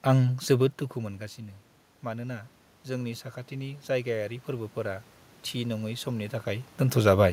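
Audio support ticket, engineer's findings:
Automatic gain rising, 2.03 to 6.75 s, after "जोबोद दुखु मोनगासिनो". Input level fell by about 12 dB; AGC then raised gain by about 8 dB over several seconds. Room noise swells with the voice, unlike a talker moving, where only the voice changes.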